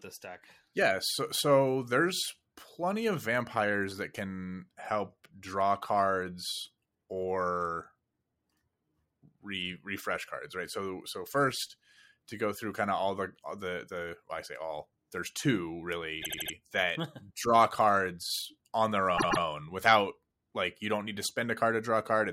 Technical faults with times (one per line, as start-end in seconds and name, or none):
16.21-16.52 repeated frames
19.16-19.42 repeated frames